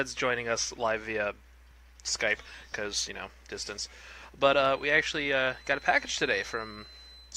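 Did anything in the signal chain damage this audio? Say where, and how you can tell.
Yes. A feedback whistle runs from 4.63 s to the end: a steady 4 kHz tone sits well below the sound, likely an acoustic loudspeaker-to-microphone loop held just short of runaway.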